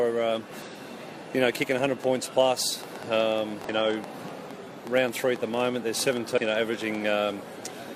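At 0.62 to 0.67 s there is damaged data in the compressed stream. Corrupt bytes leave the decoder unable to read those frames. It loses sync and hunts for the next frame header. The result is a brief glitch.

From 1.62 to 6.96 s a train of clicks runs over the sound. The pops come about seven times a second at an uneven pace, roughly forty in all. They sit around 10 dB above the audio. The likely cause is nearby interference or a faulty connection or power supply.

The same damaged data returns at 3.65 to 3.69 s and at 6.34 to 6.38 s. Each is another short glitch, heard within the clicking.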